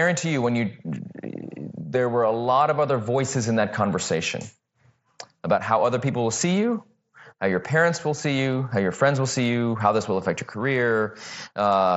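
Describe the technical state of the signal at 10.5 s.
At 10.5 s the speech is intact, with no fault at that moment; it passes through the mSBC Bluetooth headset link as it does elsewhere, with that codec's band limit and its light graininess on louder sounds.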